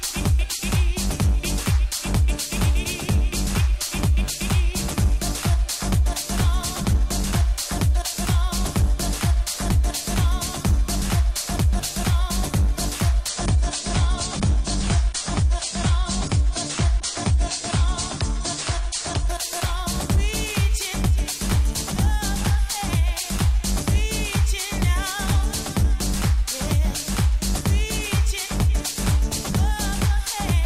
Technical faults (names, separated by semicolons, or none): adaptive stream at a lower bitrate